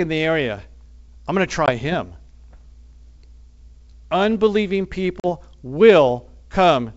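Speech carried over a G.722 wideband call shows packet loss on an ADPCM call: abrupt silent holes at 1.66 s (20 ms) and 5.2 s (40 ms), then a slightly distorted return as the decoder's predictor resynchronises, unlike smooth concealment.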